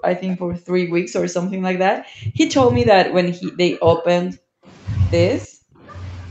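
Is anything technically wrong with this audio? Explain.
Yes. Speech suppressed in double talk at 0.0–1.25, 1.53–2.39, 2.77–4.09, 4.26–4.61 and 5.45–5.87 s: likely an echo canceller mistaking overlapping talk for echo, dipping the voice by about 40 dB in chunks.

Echo leak at 0.3–0.36 s: a faint copy about 25 dB down arrives 314 ms late, likely loudspeaker pickup the canceller failed to remove.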